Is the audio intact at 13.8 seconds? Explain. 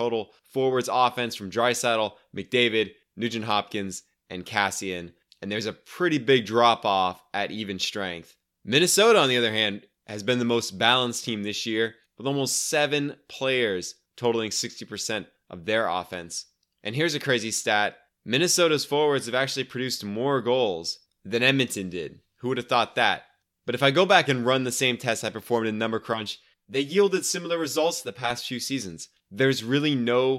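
Yes, at 13.8 seconds the speech is intact, with no audible dropout, click, distortion or other fault at that point.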